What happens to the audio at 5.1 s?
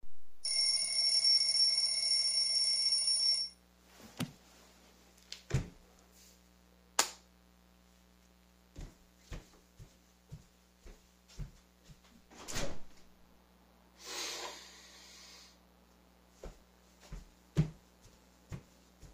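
At 5.1 s a mains buzz sits under the sound. It starts at 0.55 s and runs to the end of the clip. It comes from 60 Hz mains interference. Sharp switching spikes from a dimmer, rectifier or poor shielding leak in twice per cycle. That gives a stack of 60 Hz harmonics reaching up into the kilohertz range. It sounds like a steady, raspy buzz, roughly 35 dB below the main sound.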